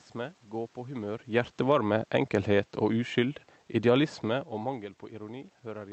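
Automatic gain falling, 1.54 to 4.84 s: the gain control judged the input too loud or its background noise too strong and eased down about 4 dB, so speech and background sink together.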